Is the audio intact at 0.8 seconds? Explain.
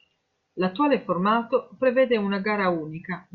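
Yes, at 0.8 seconds the speech is intact, with no fault audible at that moment.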